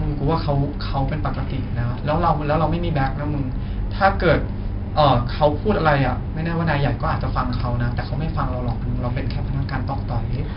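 Throughout the speech, 4-bit ADPCM compression adds a gritty hiss that rises and falls with level, heaviest on loud syllables and harsh on sharp attacks where the adaptive step lags. Nothing remains above 5.3 kHz, pointing to a low sample rate, and the damage fits roughly 44 kbps.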